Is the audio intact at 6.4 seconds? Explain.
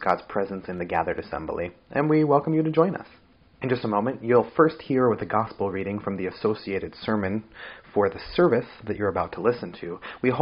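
Yes, the audio is intact at 6.4 seconds, with no dropout, click, distortion or other fault at that moment.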